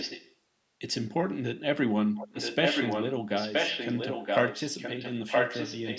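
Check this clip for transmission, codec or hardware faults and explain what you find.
An echo leak is audible in the speech, likely from a far-end loudspeaker whose echo canceller let its microphone pickup return. A copy of the speech arrives about 0.97 s late, about 10 dB quieter than the speech at 0 to 0.35 s and then as loud as the original at 2.15 to 3.13 s and 3.36 s to the end.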